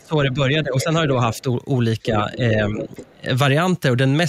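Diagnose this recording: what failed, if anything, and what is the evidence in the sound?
The talker's speech sinks and breaks up three times: across 0.0 to 1.0 s, where about half a second of it is pulled down by as much as 20 dB; in a brief 40 ms dip of about 5 dB at 1.42 s; and across 2.11 to 3.27 s, where roughly 0.7 s is cut by up to 20 dB. This is speech suppressed in double talk at the call-processing stage, likely because the echo canceller mistook the talker for loudspeaker echo and attenuated everything.

Scraps of the other side's voice leaking through appear at 0.79 to 0.84 s and 2.8 to 3.05 s, about 10 dB under the talker, and at 1.32 to 1.42 s, about 20 dB under. Each sits inside or beside the suppressed stretches. This is again in call processing, likely residual loudspeaker echo that the canceller failed to subtract from the microphone signal.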